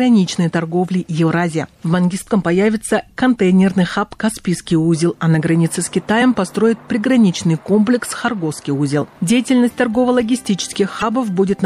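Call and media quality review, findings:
Watery, swirly texture throughout, smeared attacks, metallic chirping on bright content. Likely MP3 compression; the degree of damage fits a bitrate around 64 kbps, with weak frequency lines dropping in and out per frame.

Short glitch at 2.26 s, again at 6.18–6.22 s and 10.99–11.03 s. Damaged data in a compressed stream: corrupted frames misread or rejected, decoder loses sync and resumes at the next frame header.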